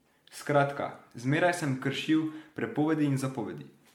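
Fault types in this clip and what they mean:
Generation loss: the speech sounds swirly, smeared and hollow throughout, with blurred consonant attacks beyond what one encode explains. The likely cause is MP3 re-encoding around seven times, consistent with 96 kbit/s, each pass piling up new quantisation noise and spectral holes.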